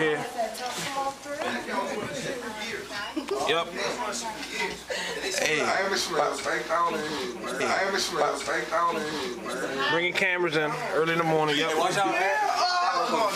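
The audio has a stream segment repeated from 7.60 to 9.62 s: the player queued one segment twice, replaying 2.02 s, visible as an identical waveform and spectrogram block with a seam at the jump.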